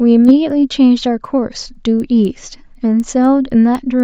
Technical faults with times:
0.00-4.04 resampler restarted on every block

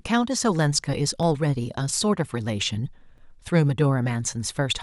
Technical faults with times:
1.23 audio missing between chunks
3.18 audio missing between chunks

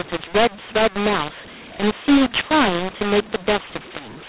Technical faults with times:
0.00-4.28 mu-law and A-law mixed up

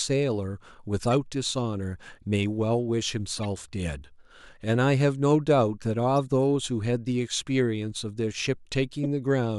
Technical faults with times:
1.03-1.05 corrupt frame decoded
3.37-3.45 corrupt frame decoded
6.27 corrupt frame decoded
9.03-9.06 corrupt frame decoded

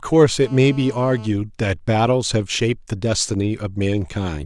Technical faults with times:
0.42-1.27 GSM phone buzz

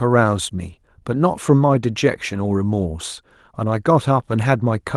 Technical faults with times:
1.69-1.75 lost packet rebuilt from error correction
2.83-2.85 lost packet rebuilt from error correction

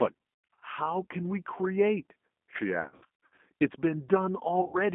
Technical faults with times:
0.00-4.94 G.729 codec
0.54-0.64 VoIP packet loss concealed by the speech codec
2.82-3.38 VoIP packet loss concealed by the speech codec
4.61-4.78 VoIP packet loss concealed by the speech codec

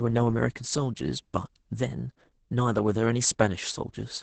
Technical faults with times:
0.00-4.22 Opus voice compression

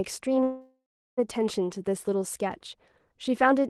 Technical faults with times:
0.43-1.19 call audio freeze

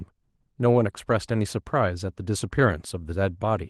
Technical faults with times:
none

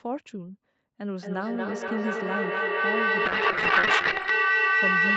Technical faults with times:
1.17-5.17 feedback howl
3.26-4.37 call bitrate drop

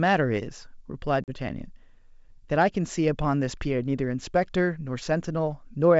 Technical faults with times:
1.24-1.32 packet loss on an ADPCM call

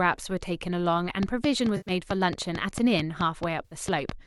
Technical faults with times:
1.23-4.10 train of clicks
1.76-1.91 AAC frame loss with concealment
3.65-3.75 AAC frame loss with concealment

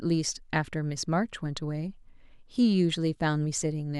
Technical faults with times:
none

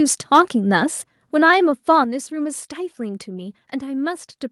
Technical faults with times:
0.34-0.40 microphone overload
1.02 microphone volume stepped down
2.04 microphone volume stepped down

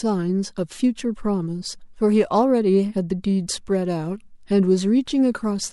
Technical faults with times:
none

